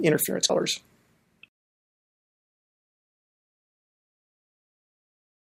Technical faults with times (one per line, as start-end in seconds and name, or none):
0.49 compressed frames skipped